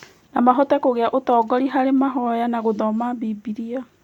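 A speech recording with nothing technically wrong with it.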